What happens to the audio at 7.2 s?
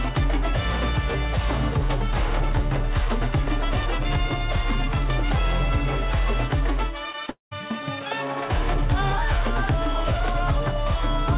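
Around 7.2 s, audio briefly failed to reach the decoder in time twice, at 7.12 to 7.16 s and again at 7.26 to 7.30 s. This is short concealed packet loss: the receiver bridged each gap of about 20 ms by extending the preceding sound, then blended back, so each spot is a quick smear or wobble.

Right after, from 7.30 to 7.53 s, comes what is likely a long network dropout. The filled-in sound fades, leaving roughly 130 ms of silence before the audio resumes without the lost portion, still band-limited below 4 kHz.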